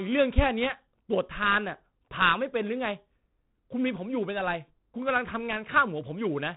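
The whole clip carries 4-bit ADPCM compression, and it's heavy. Each sample is coded as a coarse step from a prediction, so a gritty hiss rides on every louder stretch of speech and attacks crunch. Nothing comes through above 3.9 kHz, which fits a 32 kbps stream at a low sample rate.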